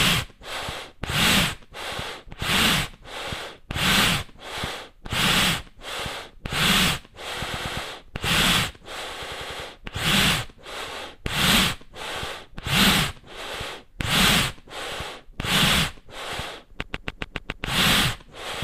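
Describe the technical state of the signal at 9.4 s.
At 9.4 s the signal is in a patch of repeated frames, running from 9.24 to 9.62 s. A short block of compressed audio, about 93 ms long, was played again by the decoder instead of moving on. That block sounds four extra times, which fits a small run of frames being written or sent more than once. The sound stutters in place there. The repeats add 371.5 ms to the playing time.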